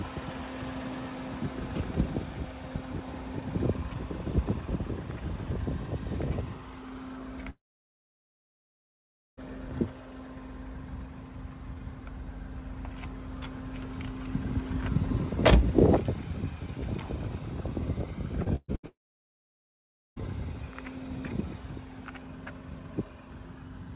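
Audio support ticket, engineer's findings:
Long network dropout, 7.5–9.39 s: about 1.9 s of audio lost; brief fading buzz, then near-silence. Likely cause: stalled network, jitter buffer concealing then muting. Waveform: flat gap, spectrogram: blank band.

Repeated packet loss (robotic sound), 18.44–18.85 s: four gaps, longest 125 ms, over half the span concealed. Choppy. Spectrogram: smeared, repeated frames chopping the energy into blocks.

Long network dropout again, 18.87–20.22 s: about 1.3 s missing, mostly silence after short concealment tail. Likely cause: network stall following the loss burst. Waveform: flatline before audio resumes. Call path is G.711 A-law at 64 kbps; nothing above 4 kHz.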